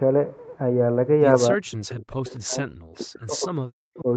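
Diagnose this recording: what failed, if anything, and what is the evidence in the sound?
From 1.57 to 4.07 s the speech dips and breaks up, falling about 40 dB, likely speech suppressed in double talk by the call's echo canceller.

At 1.90 to 1.95 s, a faint scrap about 30 dB down repeats the voice 277 ms late. This is likely an echo leak from a loudspeaker-side canceller.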